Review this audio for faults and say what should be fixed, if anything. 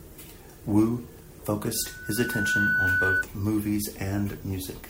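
A single piercing tone at 1.5 kHz rises out of the speech at 1.74 s, swelling over roughly three-quarters of a second into a steady squeal that ends abruptly at 3.24 s, peaking a few dB above the talker. This is loudspeaker feedback squeal: the microphone was picking up its own loudspeaker, and at 1.5 kHz the loop gain exceeded one, so the tone reinforced itself each time around until the loop was broken. To prevent it, lower the monitor gain or move the microphone out of the speaker's coverage, and notch 1.5 kHz if the loop margin is still thin.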